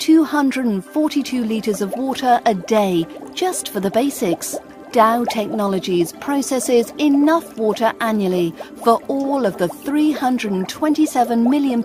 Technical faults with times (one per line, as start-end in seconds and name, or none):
none